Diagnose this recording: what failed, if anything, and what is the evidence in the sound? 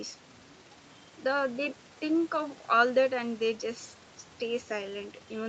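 Nothing failed here: the speech just carries the ordinary signature of a call, with the microphone processing trimming the lowest bass and the WebRTC call path leaving nothing above 8 kHz, which fits an Opus codec running at around 40 kbps.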